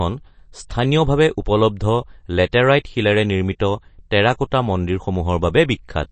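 MP3 compression throughout: the speech stops dead at 8.3 kHz and sounds plainly watery, likely from an encoder starved of bits, which fits about 32 kbps.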